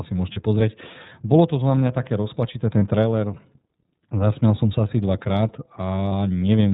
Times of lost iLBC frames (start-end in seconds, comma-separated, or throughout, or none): 0.32-0.39, 2.79-2.82, 6.09-6.13